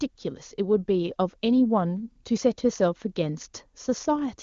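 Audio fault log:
No faults are heard in this speech clip. It passes through the AMR wideband (HD Voice) codec with little audible trace, and the band ends near 7.1 kHz; it runs at one of the codec's top rates, around 23.85 kbit/s.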